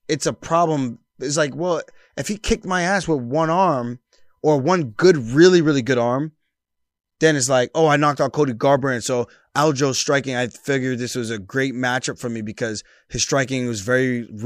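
Nothing stood out as a technical fault anywhere in the recording on listening.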